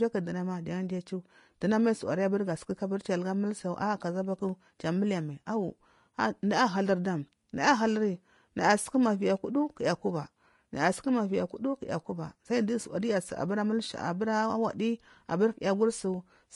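A speech recording carrying Vorbis compression damage across its whole length: nothing survives above 10.5 kHz, and the treble beneath that turns hissy and grainy rather than merely dull, which points to a low bitrate around 33 kbps. That grain, not a clean low-pass roll-off, likely marks Vorbis coding.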